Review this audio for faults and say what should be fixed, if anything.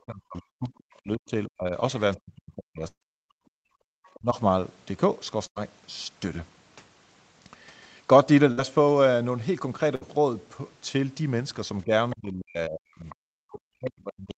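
Speech suppressed in double talk occurs from 0.0 to 1.73 s, from 2.17 to 3.29 s, from 4.15 to 4.36 s, and from 11.84 s to the end. The speech level sinks by up to about 40 dB, or about 25 dB in the short 4.15 s event, and parts of it drop out. The likely cause is an echo canceller that could not separate the near talker from loudspeaker echo while both sides spoke, so it attenuated everything. On a waveform the envelope collapses into thin stretches. A spectrogram shows the harmonics fading toward the noise floor, with the upper bands going first. Better double-talk detection or a headset would prevent this.

A burst of packet loss occurs at 2.87 to 3.03 s, 5.47 to 5.58 s, 8.52 to 8.59 s and 9.95 to 10.03 s. About 140, 100, 60 and 60 ms of audio never arrive. The receiver extends the last sound and fades it, so a voiced stretch becomes a held buzz. In the first burst the fill runs out and leaves about 70 ms of silence. 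When playback resumes, the audio has skipped ahead. A spectrogram shows a held, fading continuation ending in a hard seam, and the first burst also shows a blank gap in the waveform. A more robust network path, forward error correction or a deeper jitter buffer would prevent it.

Background gated by the echo canceller occurs from 3.57 to 3.87 s. While the loudspeaker was active, the canceller clamped the microphone down by about 32 dB for roughly 0.3 s. The room tone dips sharply and then returns when the canceller releases. On a waveform the low-level noise between phrases pinches almost to a flat line. On a spectrogram the broadband background shows a dark vertical notch with abrupt edges. Gentler residual-echo suppression, or comfort noise inserted during suppression, would prevent it.

The other side's voice leaking through occurs at 4.10 to 4.19 s, 12.10 to 12.16 s and 13.10 to 13.16 s. 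Brief scraps of a second voice sit about 30, 20 and 25 dB below the main speech. The likely cause is loudspeaker playback that the echo canceller did not fully remove from the microphone. On a spectrogram these appear as faint, short harmonic traces with their own pitch, separate from the main talker's bands. On a waveform they are barely visible. Better acoustic isolation or stronger echo cancellation would prevent it.

Short concealed packet loss occurs from 12.65 to 12.69 s. About 20 ms of audio went missing, and the decoder filled the hole by continuing the preceding sound before blending back. Against a signal already band-limited to 8 kHz by the 24 kbps Opus path, this gives a brief smear. A spectrogram shows a tiny patch of smoothed, repeated texture and a slight discontinuity at the rejoin. Reducing packet jitter or enabling redundancy would prevent it.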